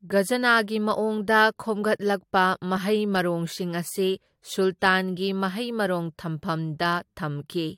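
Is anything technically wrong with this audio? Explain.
No, nothing technically wrong turns up here; the speech comes across steady and intact the whole way.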